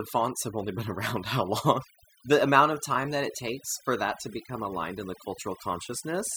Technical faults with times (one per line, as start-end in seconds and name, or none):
0.00-6.36 overdone noise removal